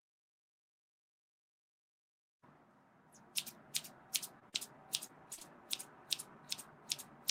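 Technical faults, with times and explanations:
4.39 to 5.43 s, short concealed packet loss, five events: 4.39 to 4.58 s, 4.49 to 4.56 s, 5.07 to 5.11 s, 5.33 to 5.39 s and 5.39 to 5.43 s. Each time, 20 or 40 ms of audio reached the decoder too late. The receiver filled each hole by continuing the last sound. It followed the sound's pitch if it was voiced and used shaped noise if not. Then it blended back into the real audio. Each patch sounds like a brief smear or wobble.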